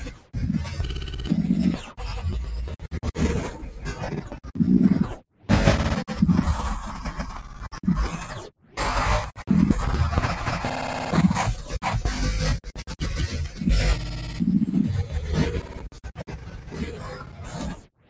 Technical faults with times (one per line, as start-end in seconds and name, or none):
0.00-18.10 noise suppressor applied to music or sounds
0.00-0.35 sound cut by the noise suppressor
1.78-5.49 sound cut by the noise suppressor
7.43-9.42 sound cut by the noise suppressor
12.67-18.10 sound cut by the noise suppressor